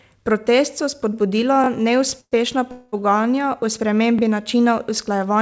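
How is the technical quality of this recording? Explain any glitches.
The speech carries two stutter-type repeats and two short hold-ups, heard over a band that stops at 8 kHz, which fits a wideband call codec.

Repeated buffer: at 1.64 s, right after "so spodbudila", one 20 ms chunk plays three times, and at 4.19 s, after "pogajanja o", a chunk plays twice. Late audio forced each replay. It sounds like a quick stutter. On a waveform it shows as identical copied segments with hard edges at each join.

Call audio freeze: from 2.21 to 2.34 s the sound smears into a fading buzz, ending in about 50 ms of silence. From 2.72 to 2.94 s a 209 ms buzzy hold comes just before "pogajanja o". The likely cause is delayed packets emptying the jitter buffer. Each freeze appears as a smeared horizontal band on a spectrogram, and the speech afterwards runs later by the same amount.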